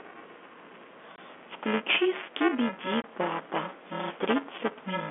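The playback side of this speech recording has slipped against the hardware reading its ring buffer, producing buffer tearing: the two cross inside every period, so roughly a tenth of each buffer carries audio from a few milliseconds earlier, butted against the present with hard joins. That yields a steady robotic buzz at 375 Hz, present only while sound is playing, which fits a 128-sample buffer. Separately, the receiver lost packets and filled the gaps with silence: at 1.16 s and again at 3.02 s, a 20 ms hole, consistent with a single lost packet each time, cuts the speech abruptly with hard edges. All of this sits within a narrow telephone band typical of G.711 mu-law coding.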